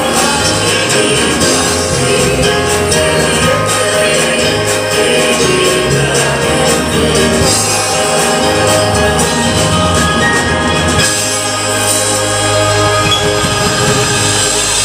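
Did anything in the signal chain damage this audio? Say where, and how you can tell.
Yes. Throughout the clip the loudest moments carry a gritty crackle, a brittle edge that appears on the peaks and vanishes in quieter passages. That is hard clipping: the signal was driven about 8 dB past what a stage could pass, most likely the converter or a sample-format conversion, so the peaks were sliced flat. Only a small share of samples, around 2 percent, hit the ceiling, but each flattened top sprays harmonics high up the spectrum.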